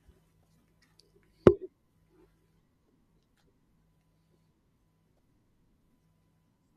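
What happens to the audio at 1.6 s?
Nothing goes wrong at 1.6 s: the speech carries on intact there, with no dropout, click or other disturbance.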